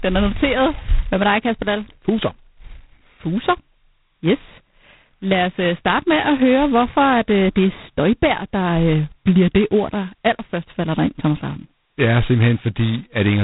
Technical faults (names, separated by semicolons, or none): G.726 ADPCM